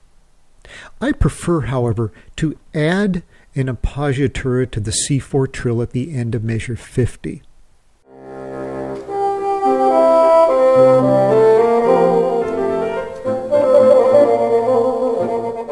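Nothing goes wrong anywhere in this one, so there's nothing to flag.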